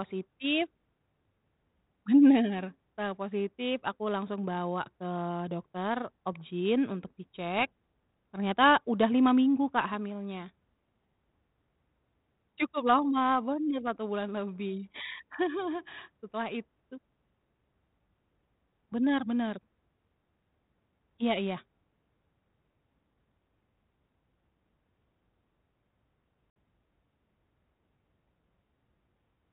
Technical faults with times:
26.50-26.55 packet loss on an ADPCM call

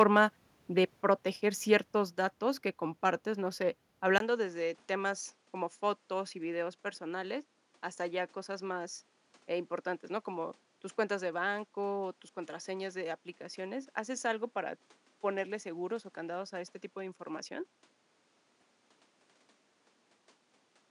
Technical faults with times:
0.00-0.17 microphone overload
4.18-20.90 input switched to a poorer device

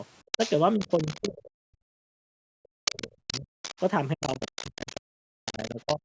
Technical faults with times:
0.32-1.29 other side's voice leaking through
0.77-3.50 speech suppressed in double talk
2.85-3.84 other side's voice leaking through
4.14-6.01 speech suppressed in double talk
4.21-5.01 other side's voice leaking through
5.45-5.96 other side's voice leaking through

